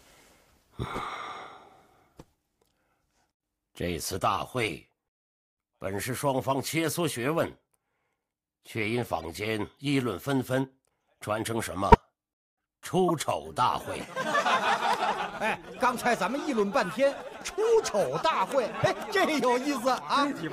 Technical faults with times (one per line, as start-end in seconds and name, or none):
9.19-9.24 corrupt frame decoded
11.92-11.95 corrupt frame decoded
13.08-13.11 corrupt frame decoded